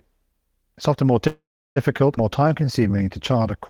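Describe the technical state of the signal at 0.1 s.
At 0.1 s the speech signal is intact, with no technical fault present at that moment.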